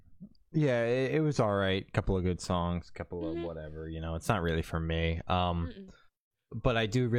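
Speech recording with no audible technical faults anywhere in the clip.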